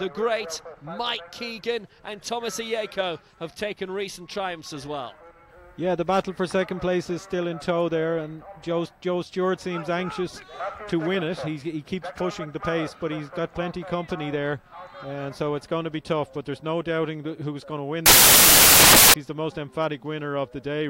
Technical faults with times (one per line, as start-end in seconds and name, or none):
18.06-19.14 samples built from the wrong bytes